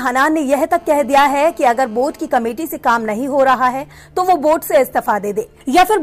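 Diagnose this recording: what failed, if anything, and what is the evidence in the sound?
GSM phone buzz got into the analogue wiring from 0.77 to 2.29 s: a steady, raspy 217 Hz buzz about 30 dB down, from a nearby phone's call-state bursts being rectified.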